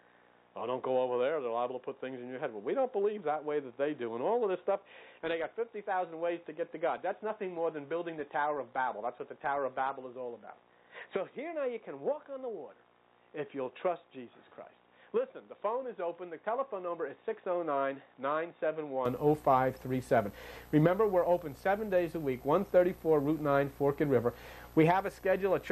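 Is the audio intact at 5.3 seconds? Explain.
No. At 5.3 s the sound is dull and boxy, with nothing above 3.8 kHz, a noise floor around 50 dB below the signal, and a level roughly 5 dB lower. This runs from 0.0 to 19.06 s and clears without a gap, likely an input switched to a poorer device whose narrower band, own tone and own noise replace the original microphone's.

On top of that, from 5.04 to 11.04 s, codec artefacts rise abruptly, with no gap at either edge. This comes from an adaptive stream at a lower bitrate: a slower connection forced a leaner encoding, which fits a step down from about 96 to 24 kbit/s AAC.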